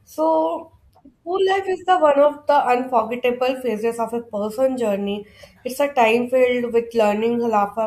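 No technical faults are audible in this speech recording.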